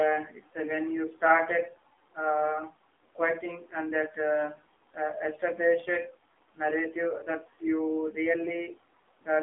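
Throughout, the speech carries AMR narrowband mobile codec damage. Nothing passes above 3.6 kHz. The plainly buzzy, synthetic tone fits a low 7.4 kbps rate.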